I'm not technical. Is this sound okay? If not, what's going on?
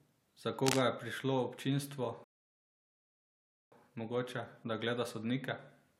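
No. From 0.61 to 0.82 s, just before "je prišlo občinstvo mogoče", a rough scratching rustle rides over the speech. That's cable scratch noise, likely from a worn, jiggled cable or connector. It sounds ragged, unlike a single click.

At 2.24 s, right after "je prišlo občinstvo", the speech stops dead until 3.72 s, then picks up exactly where it left off. That's a rebuffering stall: the player ran out of audio and waited for more, adding about 1.5 seconds. Nothing is skipped, unlike a dropout.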